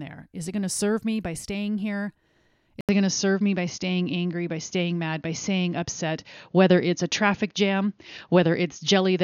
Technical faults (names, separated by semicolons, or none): input switched to a poorer device